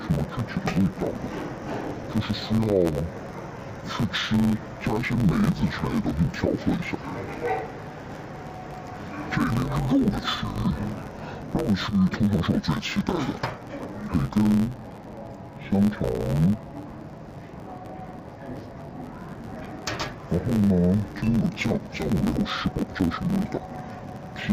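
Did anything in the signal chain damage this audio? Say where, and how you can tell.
Yes. At the sample-format conversion stage, interleaved audio was read as planar throughout the clip. Each 10.88 ms block, which alternates left and right samples, was split so that its first half became one channel and its second half the other. Both halves then play together at half speed within each block. Because the blocks are this short, the sound is dull and robotic, with a buzz at the 91.9 Hz block rate and no clear octave drop.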